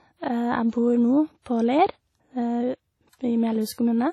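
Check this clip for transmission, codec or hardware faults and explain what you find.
One fault, present the whole way through. The speech sounds washy and ringing with breathing hiss and nothing above 13.8 kHz, likely WMA compression near 32 kbps, long blocks smearing quantisation noise.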